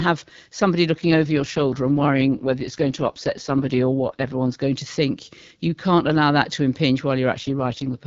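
Speech over an AMR wideband HD Voice link, with two AMR rate drops, from 0.94 to 4.57 s and from 7.33 s to the end. The codec steps down to protect a weak radio link, which sounds consistent with 12.65 falling to 6.6 kbit/s. The band and continuity hold, but the voice turns rough and synthetic.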